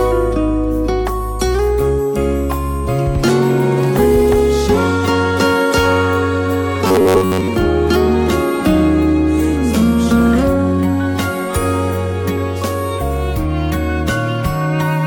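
From 6.87 to 7.48 s the sound turns into a rigid, metallic buzz near 94 Hz; robotic sound from repeated short buffers, likely looping roughly 11 ms chunks through most of that stretch.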